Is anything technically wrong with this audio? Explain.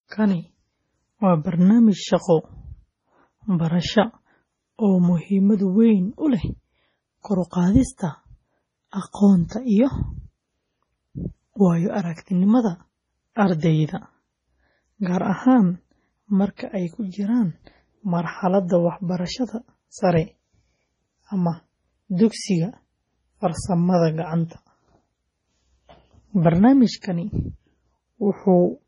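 Yes. Throughout, the speech sounds watery and swirly, with a metallic chirp on s sounds, smeared consonant onsets, and nothing above 10.6 kHz. This points to heavy MP3 compression, likely at a low bitrate around 24 kbps. With so few bits available, the encoder cut the treble at a fixed point and dropped weaker frequency lines. Those lines flicker on and off from frame to frame, which produces the swirling texture.

From 27.01 to 27.04 s there is pre-echo: a short hiss arrives about 26 ms before a sharp attack, and the attack itself sounds softened. The codec spreads its quantisation noise across a whole block. Because the onset falls late in that block, noise sized for the loud part also fills the quiet stretch before it.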